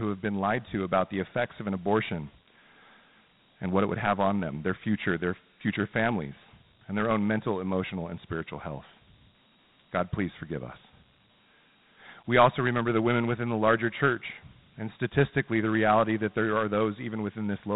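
The speech runs through Dialogic VOX ADPCM, the 4-bit OKI adaptive scheme used for phone menus and voicemail. Each sample is coded as a small step from a running prediction, and the sound fits a 32 kbit/s stream at 8,000 samples a second. That coarse step size leaves a plainly audible gritty hiss riding along with the voice from start to finish. The narrow sampling rate cuts everything off above about 3.9 kHz, giving a dull telephone-band tone.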